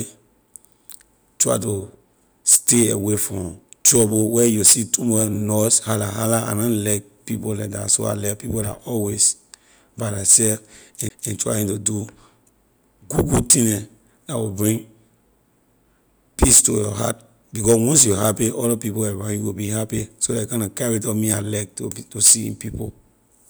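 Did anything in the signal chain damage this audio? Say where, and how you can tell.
Yes. At playback, a CD skip at 11.09 s threw the laser onto another turn of the spiral: a brief mute, then the speech resumes from a different point.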